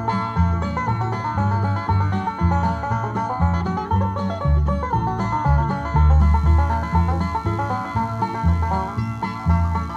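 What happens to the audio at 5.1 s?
Nothing goes wrong at 5.1 s; the audio plays through that moment intact, with no dropout, click, glitch or other fault.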